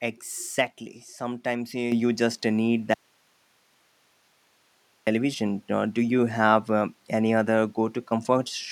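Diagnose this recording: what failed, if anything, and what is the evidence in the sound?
Microphone volume stepped up, at the call-processing stage. At 1.92 s the level jumps by about 7 dB in a single step. Speech and background noise rise together. That points to automatic gain raising the device's input volume, not the talker speaking louder.

Audio dropout to a faint residue, from 2.94 s to 5.07 s, about 2.1 s long. The speech cuts out abruptly and returns just as abruptly. Only hiss fills the gap, roughly 40 dB below the speech. The path after the break stayed live. The likely cause is the wanted signal being lost upstream of that live path.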